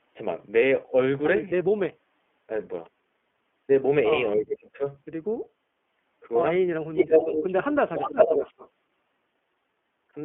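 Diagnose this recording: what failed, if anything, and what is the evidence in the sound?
Codec stage: the whole clip is confined to a narrow telephone band, with nothing below about 200 Hz or above 3.4 kHz, and the speech has the slightly rough, synthetic edge of frame-based excitation coding. That fits the iLBC codec in its 15.2 kbps mode with 20 ms frames. Each frame's excitation is coded on its own, which keeps speech intelligible but plainly degrades its texture and naturalness.

Call processing: the talker's level collapses three times, from 1.65 to 2.02 s, 4.36 to 4.84 s and 6.69 to 7.42 s. The drops are deep, roughly 40 dB in the first and last and around 25 dB in the second. This is speech suppressed in double talk, likely from an echo canceller that could not tell near speech from far-end echo while both sides spoke, so it attenuated everything.

Call processing, far end: a delayed copy of the voice returns as echo leak. 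A brief scrap from 4.37 to 4.42 s sits roughly 10 dB below the speech at a 289 ms lag. Two longer stretches, 6.96 to 7.55 s and 7.95 to 8.69 s, arrive at a 362 ms lag and at about the same level as the direct speech. Residual loudspeaker pickup was likely left uncancelled by the far side's echo canceller and sent back.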